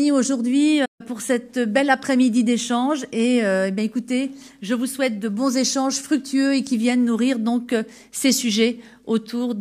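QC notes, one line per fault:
0.85–1.01 s, playback stall: the audio stops in mid-flow and drops to silence for about 141 ms, then carries on. The sudden gap, with no fade in or out, is what makes it sound like a hiccup. The likely cause is the player running out of buffered data or its output thread being blocked briefly. On the waveform it shows as a flat, near-silent stretch with hard edges. On a spectrogram it is a clean vertical blank band across all frequencies.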